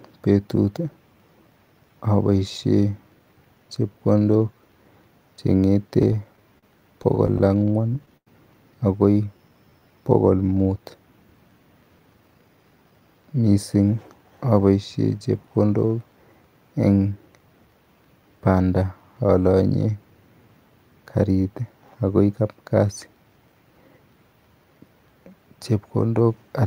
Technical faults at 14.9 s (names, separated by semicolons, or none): none